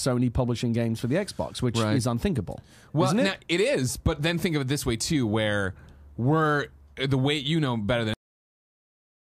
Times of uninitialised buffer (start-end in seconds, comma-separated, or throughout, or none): none